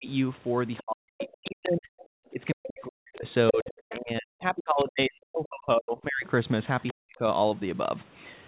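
Speech suppressed in double talk opens the clip, a brief dip of about 35 dB between 0.00 and 0.08 s. It most likely happens because the echo canceller cannot separate the near talker from loudspeaker echo while both sides are active, and so it attenuates everything. The other side's voice leaking through follows from 0.78 to 2.05 s, a second voice about 15 dB below the speech. Its probable cause is echo that cancellation failed to remove from the microphone. At the same time, from 0.80 to 6.26 s, suppression pulls down the main speech for roughly 4 seconds in total, with drops of about 40 dB. The leak returns from 2.63 to 3.98 s at about 15 dB down, and again from 6.81 to 6.92 s at about 25 dB down. A final suppression of about 40 dB follows from 6.92 to 7.26 s. All of this sits within a narrowband call sound that stops at 4 kHz, which fits a 64 kbps G.711 mu-law path.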